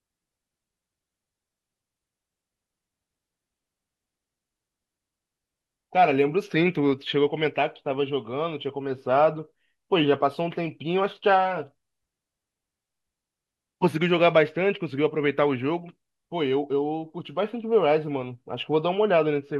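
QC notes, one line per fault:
No faults were found in this speech clip. Nothing needs flagging for QC.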